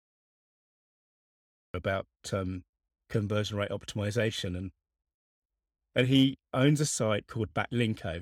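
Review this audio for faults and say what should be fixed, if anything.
There's a cut-off start here: the first 1.74 s is dead digital silence, then the speech jumps in at 1.74 s already mid-sound, with no natural attack. The capture clearly started late, after the talker had begun. To prevent it, arm recording and let it run a second or two before anyone speaks.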